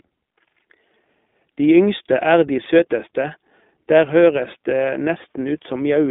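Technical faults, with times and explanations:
Throughout: iLBC codec. The speech is confined to a telephone band of about 200 Hz to 3.6 kHz, so it sounds thin and muffled. Each 20 ms frame is coded on its own, leaving a plainly rough, synthetic edge that fits the 15.2 kbps mode.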